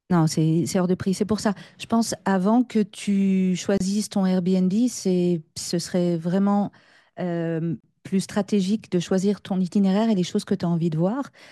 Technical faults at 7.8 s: gap at a join of encoded pieces

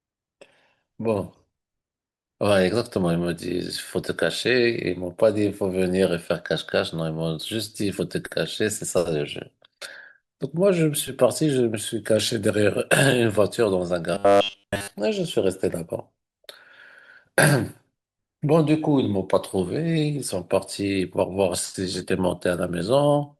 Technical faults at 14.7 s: robotic sound from repeated short buffers

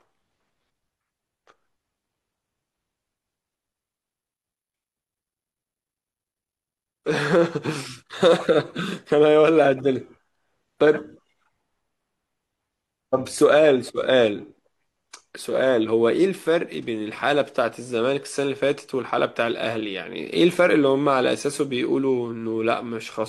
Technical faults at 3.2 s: none

